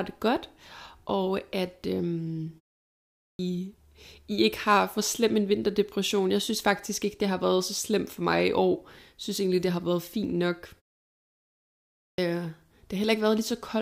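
At 3.2 s and again at 11.96 s, a clipped start after a pause: the output path dozes during silence and needs a moment to wake. After gaps of 0.68 s and 1.23 s, the first 0.19 s and 0.22 s are lost, so speech bursts in abruptly. Unlike muted pauses, actual speech goes missing.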